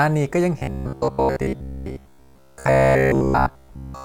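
Speech in which new audio stops arriving often enough from 0.59 s to the end, so the software likely keeps repeating a short buffer of about 15 ms while most of the real audio is skipped. This robotic sound from repeated short buffers forces a rigid, metallic 66.7 Hz buzz that only roughly follows the speech.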